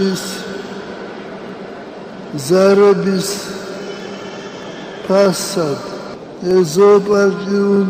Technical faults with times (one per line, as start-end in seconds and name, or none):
0.24-7.76 clock drift buffer slips